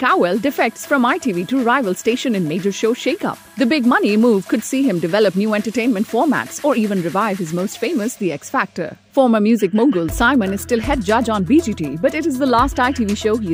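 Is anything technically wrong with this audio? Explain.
No, no technical faults found.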